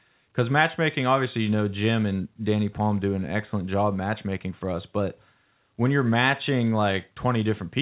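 No technical faults can be heard in this speech recording. It carries the sound of a working call path, with nothing above 4 kHz, a narrowband limit that points to a telephone codec such as G.711 A-law.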